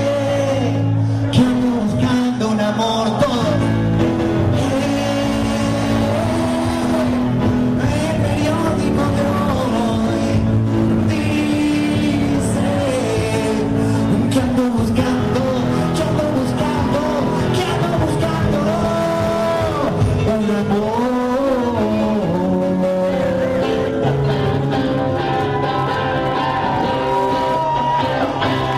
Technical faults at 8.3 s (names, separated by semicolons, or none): none